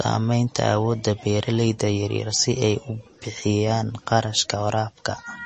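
Throughout the speech, the sound has a watery, swirling quality with nothing above 8.3 kHz, likely from MP3 compression at a bitrate around 32 kbps. Unlike a plain low-pass filter, which only dulls the top, weak frequency lines flicker on and off, so sibilants chirp and attacks smear.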